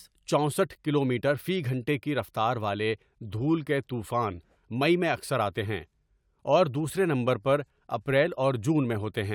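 No technical faults can be heard anywhere in the recording; the speech signal stays continuous and stable throughout.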